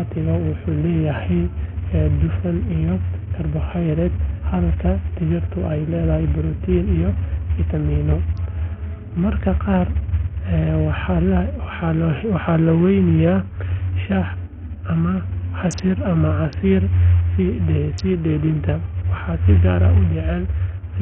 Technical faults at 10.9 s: Bluetooth SBC compression

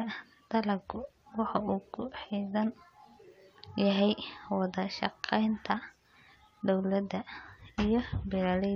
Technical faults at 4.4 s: none

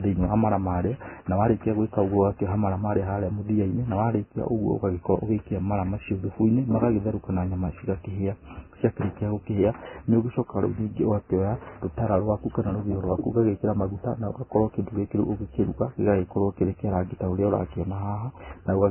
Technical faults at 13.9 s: Vorbis compression

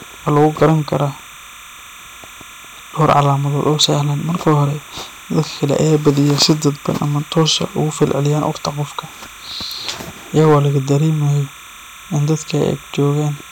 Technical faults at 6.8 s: timecode bleed; hard clipping

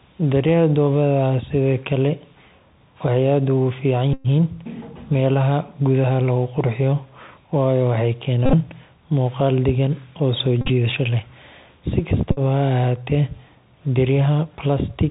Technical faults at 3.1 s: Bluetooth CVSD headset codec

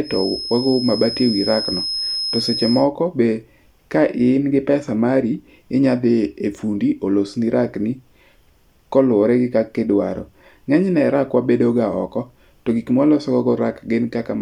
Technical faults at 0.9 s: feedback whistle

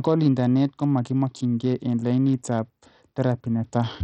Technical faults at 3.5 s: Bluetooth SBC compression

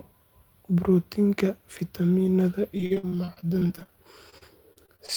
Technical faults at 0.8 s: none

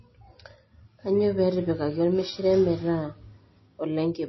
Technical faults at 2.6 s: MP3 compression; mains buzz

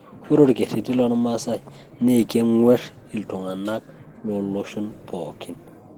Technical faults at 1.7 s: Opus compression

